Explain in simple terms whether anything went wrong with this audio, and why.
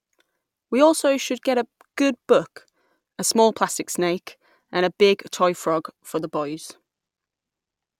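Nothing went wrong here: listening closely to the speech, no problem of any kind stood out at any point.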